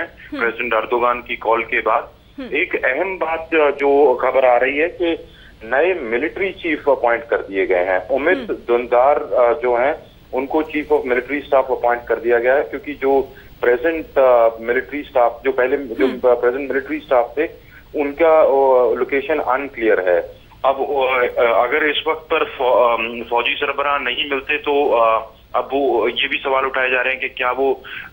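No technical faults can be heard anywhere in the recording, and the signal holds steady throughout.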